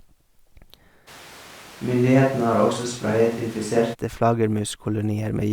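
From 1.09 to 3.93 s the speech abruptly turns roomy and hollow, with less bass and added room noise. Likely a switch to a distant microphone.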